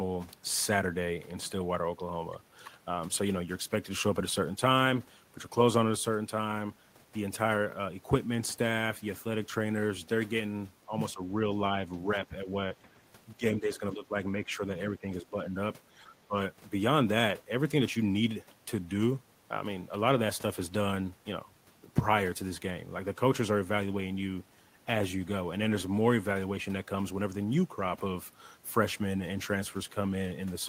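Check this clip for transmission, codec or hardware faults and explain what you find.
The speech is repeatedly pulled down between 10.86 and 16.36 s, most likely speech suppressed in double talk: the echo canceller can't separate its own talker from the far-end echo, so it attenuates both. The speech dips by roughly 10 dB, ranging from about 5 to 15 dB, at 10.86–10.93, 11.13–11.21, 12.06–12.68, 13.35–14.15, 14.35–14.62, 15.01–15.54 and 15.95–16.36 s.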